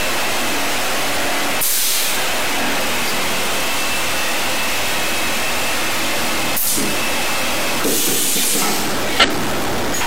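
From the start to the end, the audio carries a steady distortion. Quiet moments do not fall silent but fill with a gritty noise. This points to a stuck bit. The likely cause is one data bit held at a fixed value by a broken line or converter. About half the sample values then land off by that bit's weight. The error follows the waveform's shape and flips with the sign of small values.

At 3.07 to 3.11 s, a short glitch breaks through. A similar glitch follows at 5.53 to 5.58 s, and another at 9.20 to 9.25 s. Each is damaged data in a compressed stream. Bytes in the encoded stream were wrong at those points. The decoder misread the frames, lost sync and hunted for the next frame header. Each burst lasts about 40 to 55 ms.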